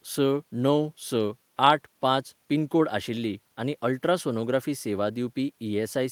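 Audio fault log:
Nothing to log here; no faults turn up anywhere in this bit of speech.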